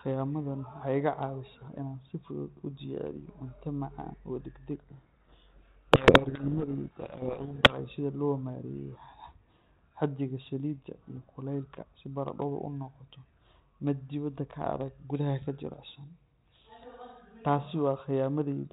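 From 4.78 to 7.79 s, a codec payload misread buries the speech in harsh distortion. The G.726 code words are read with their bits in the wrong order, and the distortion ends abruptly right before "sida loo". A low G.726 bitrate would rasp throughout, not only in one span.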